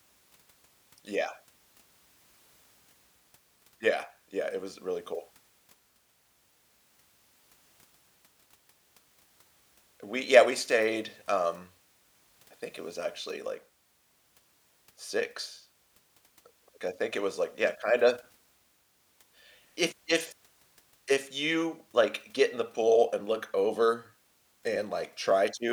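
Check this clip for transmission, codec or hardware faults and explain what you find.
No faults found here.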